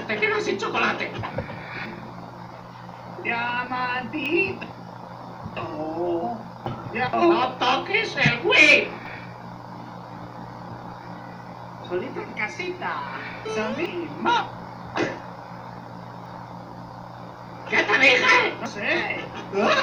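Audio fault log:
1.86, 4.26, 6.66, 9.06, 11.46, 13.86, 16.26, 18.66 s: audio missing between chunks. Roughly a tenth of a second vanishes at each point and the two sides butt straight together, so the sound jumps forward rather than falling silent. The strict 2.4 s spacing sets this apart from random dropouts or packet loss. The likely cause is a process handling 2.5 s chunks that loses a short piece at every handover.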